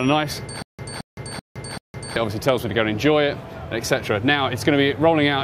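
From 0.62 s to 2.16 s there is a stutter with silent gaps. A burst of about 220 ms plays, then about 165 ms of dead digital silence follows. The same burst comes back four times, once every 385 ms, at a steady rate. The likely cause is a stalled player or stream that replayed its last buffered fragment at each retry and then ran dry. Whatever sound belonged in that stretch never plays.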